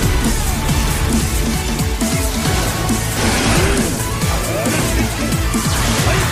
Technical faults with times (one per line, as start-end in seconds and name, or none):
none